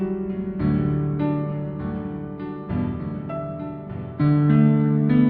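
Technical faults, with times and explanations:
No technical faults can be heard in this music clip.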